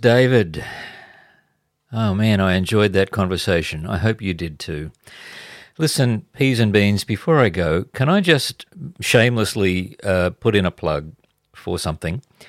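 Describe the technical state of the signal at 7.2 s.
At 7.2 s the signal is intact, with no audible dropout, distortion, noise burst or other technical fault in the speech at that point.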